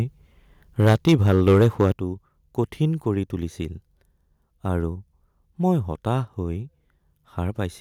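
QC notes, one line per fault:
0.79–1.91 s, microphone overload: The input level was likely set too high, driving peaks about 11 dB past the converter's ceiling, so roughly 7 percent of samples are flattened at the converter's limit. Those squared-off tops give the loudest syllables a harsh, crackling edge.
0.93 s and 1.92 s, microphone volume stepped down: The call software likely reacted to the overload by cutting the device's input gain in single steps, first by about 2 dB and then by about 7 dB just as the distortion ends. Speech and background drop abruptly together at each step.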